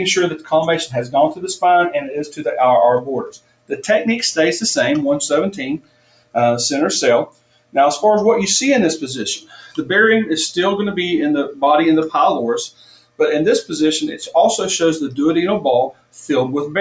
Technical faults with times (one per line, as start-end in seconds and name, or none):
0.00-16.81 noise suppressor applied to music or sounds
0.36-0.52 sound cut by the noise suppressor
2.06-2.42 sound cut by the noise suppressor
3.27-3.74 sound cut by the noise suppressor
5.78-6.36 sound cut by the noise suppressor
7.26-7.76 sound cut by the noise suppressor
9.39-9.83 sound cut by the noise suppressor
12.69-13.20 sound cut by the noise suppressor
15.90-16.18 sound cut by the noise suppressor